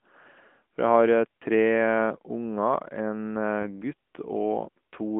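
Speech recorded through the AMR narrowband mobile codec, with its band confined to roughly 200 Hz to 3.4 kHz and nothing above. The coding damage is plainly audible: a buzzy, synthetic edge where the codec rebuilds the voice from a vocal-tract model excited by a few pulses per subframe, at a quality that fits a mid-range AMR-NB mode around 10.2 kbps. There are also two lost AMR speech frames. At 1.39 to 1.42 s there is a short dip and warble, consistent with a single 20 ms frame failing its checksum and being concealed by repeating the previous pitch and spectral settings at reduced gain. At 3.62 to 3.82 s the disturbance is longer, about 0.2 s. It also points to one lost 20 ms frame, but the concealment drags the sound out and fades it before normal decoding recovers, so the speech returns briefly weak or rough.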